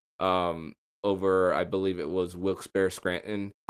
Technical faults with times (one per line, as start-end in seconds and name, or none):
0.00-3.69 clock drift between sender and receiver
1.47-3.31 repeated timing corrections
3.64-3.69 short stall from a late packet